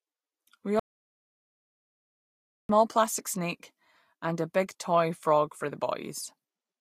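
At 0.79 s the speech cuts off mid-flow into dead digital silence, with no room tone, until it resumes at 2.69 s, losing about 1.9 s. This is an audio dropout to silence, likely from the input being lost while recording continued writing silence.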